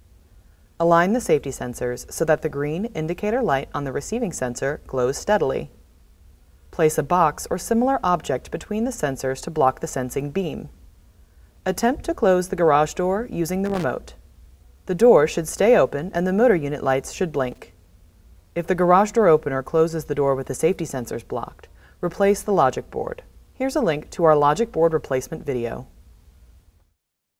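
Loose connector crackle appears at 13.65 to 13.84 s and again at 17.52 to 17.58 s: a worn or dirty contact making and breaking as it shifts, chopping the signal into brief irregular bursts of scratchy crackle.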